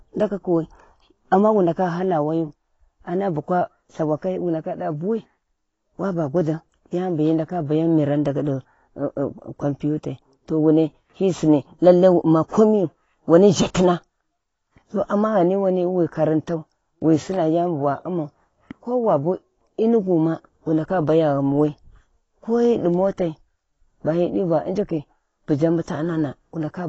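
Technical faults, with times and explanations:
Throughout: AAC compression, likely at a low bitrate around 24 kbps. Nothing is present above 7.9 kHz, so the speech sounds dull and smeared, with warbling, fizzy sibilants.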